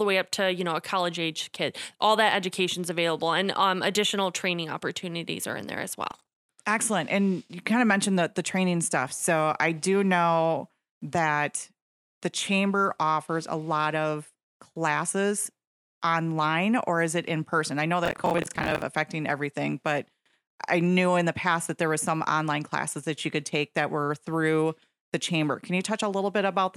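After "are in there as", from 6.11 to 6.49 s, and again after "in person I know", from 18.06 to 18.82 s, processor overload crackle tears through the speech. Dozens of roughly 10 ms buffers miss their deadline and replay stale audio, giving a gritty crackle, not clean silent dropouts.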